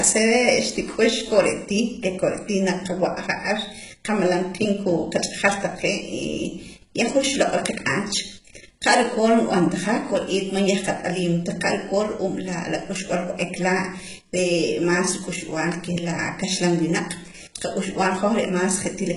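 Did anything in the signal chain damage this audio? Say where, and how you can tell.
Yes: the codec stage, throughout the speech, most likely HE-AAC compression at a very low bitrate, around 12 kbps. Treble above the crossover is rebuilt by copying lower bands upward, so s sounds come out gritty and lispy, harmonics misalign, and nothing remains above 11.1 kHz.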